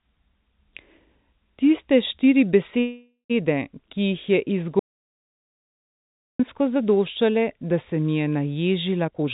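From 2.80 to 3.32 s a call audio freeze stretches the last sound into a fading buzz that ends in about 0.12 s of silence, likely because packets stalled and the jitter buffer ran dry. The speech then resumes exactly where it stopped, so nothing is lost.

From 4.79 to 6.39 s an audio dropout to silence cuts the speech off mid-flow for 1.6 s of silence, with no room tone at all. This is likely a lost input or link. Unlike the freeze, there is no fading tail, and whatever was said during the gap is gone.

From 9.04 to 9.28 s a jitter buffer speed-up makes the speech run at about 187% speed while keeping its pitch. Roughly 0.2 s is trimmed away in tiny pitch-period chunks, which makes this stretch sound hurried rather than chipmunk-like. The whole call stays band-limited to 4 kHz, consistent with a G.711 narrowband path.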